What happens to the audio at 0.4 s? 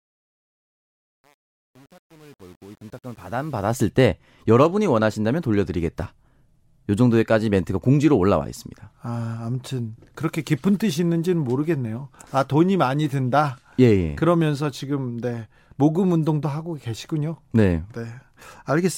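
At 0.4 s the speech fade-in shows truncation distortion on a fade, from 0 to 3.87 s. The quiet start, consistent with about 8-bit, undithered truncation, sounds gritty; the waveform shows blocky square steps and the spectrogram shows broadband fuzz.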